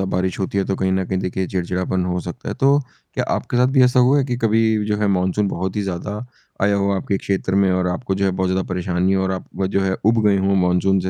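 No dropouts, clicks, distortion or level jumps turn up anywhere in the recording.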